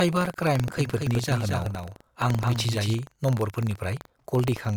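Throughout, buffer tearing: the ring buffer's writer and reader have slipped, splicing a small slice of older audio into each period, heard as a 23.4 Hz rattle under the speech, which fits a 2048-sample buffer. From 0.78 to 2.94 s, a doubled audio track, likely from a second, slower capture path, adds a dry full-band copy about 5 dB quieter, trailing by roughly a fifth of a second and starting and stopping abruptly.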